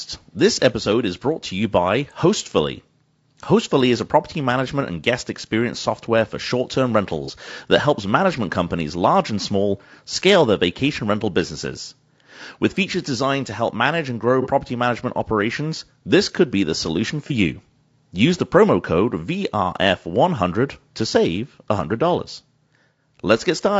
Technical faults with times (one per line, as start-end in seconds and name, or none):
0.00-23.80 low-delay AAC compression
0.32-0.35 AAC frame loss with concealment
7.25-7.30 AAC frame loss with concealment
14.42-14.47 AAC frame loss with concealment
17.27-17.32 AAC frame loss with concealment